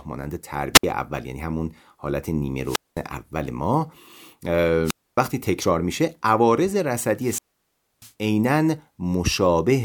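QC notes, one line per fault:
0.74 to 8.13 s, wireless microphone squelch dropout, four events at 0.74–0.84, 2.63–3.03, 4.84–5.18 and 7.17–8.13 s. Each time the FM radio signal weakens, hiss rises, and the receiver's squelch cuts the output to near silence for 63, 213, 267 and 638 ms before the speech resumes.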